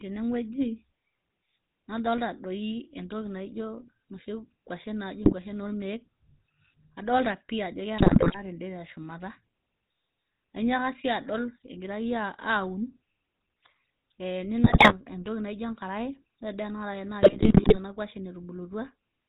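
This is speech passed through the GSM full-rate codec for its whole length. The sound is buzzy and gravelly, with nothing above 4 kHz. The roughness is plainly audible and fits the 13 kbit/s full-rate coder. GSM bit errors break in at 5.24–5.34 s, 7.98–8.38 s, 14.64–14.93 s and 17.22–17.78 s. The sound turns to squawks, pops and gargling there. Corrupted filter, pitch and gain values reached the decoder. Each bad frame bends the spectrum or jumps in level.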